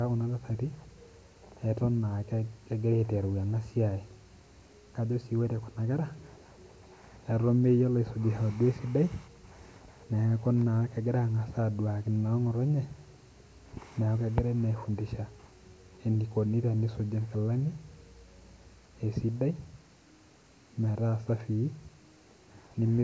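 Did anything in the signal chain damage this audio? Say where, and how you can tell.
No, nothing along the way seems to have harmed this speech recording, and there's no fault I could point to at any stage.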